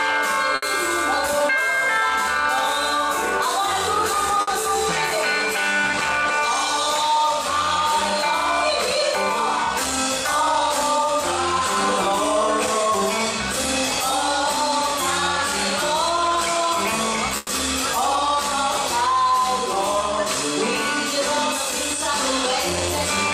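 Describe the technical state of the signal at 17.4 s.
At 17.4 s the signal is inside a call audio freeze running from 17.37 to 17.52 s. The last sound is stretched into a short buzz or hiss lasting about 120 ms, with no silence, and the audio then resumes exactly where it stopped, so nothing is lost but everything after is pushed 120 ms later. The likely cause is delayed packets draining the jitter buffer, with the receiver concealing the gap until data returned.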